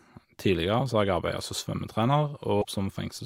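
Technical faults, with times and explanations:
2.58 to 2.65 s, damaged data in a compressed stream: corrupted bytes make the decoder misread frames and lose sync, garbling about 66 ms of speech.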